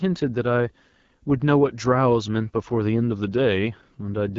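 From start to finish the speech passes through the AMR wideband (HD Voice) codec at what sounds like about 8.85 kbit/s, the second-lowest rate. At that rate the speech model is starved, so voicing turns rough and raspy. Nothing is present above 7.5 kHz.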